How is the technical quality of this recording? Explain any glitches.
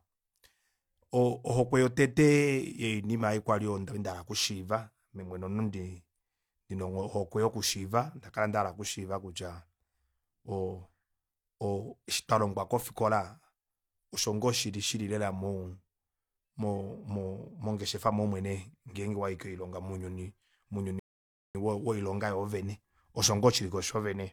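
One glitch is audible. At 20.99 s the speech stops dead and resumes at 21.55 s: a rebuffering stall, where playback exhausted its downloaded audio and paused until more arrived. It adds 0.55 s of silence without losing anything, and the speech picks up exactly where it broke off. A waveform shows a flat gap, and a spectrogram shows a clean vertical blank band.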